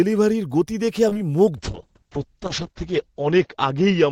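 At 0.85 to 0.89 s there is a short stall from a late packet. A packet arrived too late and the jitter buffer ran dry. The receiver held the last sound for about 17 ms, then resumed in the same place. Nothing is lost. The speech just stretches briefly.

Two short concealed packet losses follow. One spans 1.09 to 1.19 s and the other 1.13 to 1.17 s. Each drops about 20 ms of audio. The decoder fills the gaps by extending the preceding speech and then blends back in. The result is a brief smear or wobble.

From 1.58 s to the end there is a call bitrate drop. The encoder falls from 64 kbps to 7 kbps and stays at the lowest rate for about a second. The bandwidth shrinks from 20 kHz to 8 kHz. The speech turns muffled and rough, with a watery coarseness.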